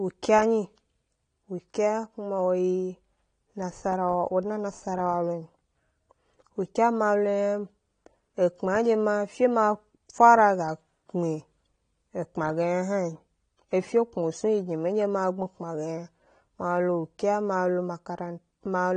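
Throughout, the speech sounds dull and warbly, likely from AAC compression at a low bitrate such as 32 kbps; a spectrogram shows nothing above 9.8 kHz.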